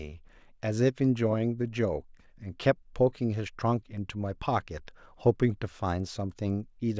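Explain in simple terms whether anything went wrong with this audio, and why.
From 5.4 s to the end, the speech gains a steady ticking ten times a second: a resampler restarted on every block. Each 100 ms chunk was converted alone, leaving a small glitch at every seam. Unlike random dropouts, the ticks are evenly spaced and stop during pauses.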